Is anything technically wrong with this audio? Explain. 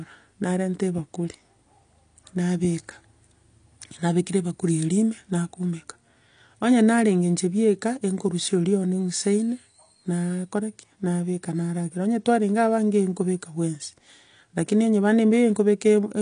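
Yes. Throughout the speech, likely AAC compression at a low bitrate, around 32 kbps: dull, smeared and fizzy sibilants, with a spectrogram showing nothing above 9.8 kHz and patchy high bands.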